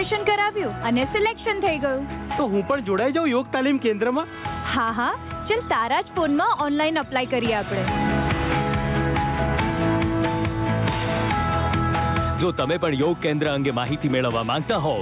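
Gain pumping runs through the whole clip: the gain is pulled down by roughly 10 dB under every loud sound, leaving a squashed level. This is likely an input gain set far too high with a fast limiter clamping each peak.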